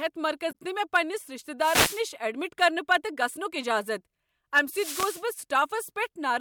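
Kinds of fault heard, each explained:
Damaged data in a compressed stream: Some of the coded data got mangled, so the decoder choked on those frames and had to hunt for the next good header to resync. Here that comes out as a quick blip from about 0.49 to 0.55 s.
Wireless microphone noise hit: The analogue FM radio link faded as reflections cancelled, letting receiver noise surge up over the speech. You get a brief swish of static at 1.59 to 2.03 s, between "پنٛنس رشتہ" and "ایڈمٹ کرنہٕ", and again at 4.70 to 5.24 s.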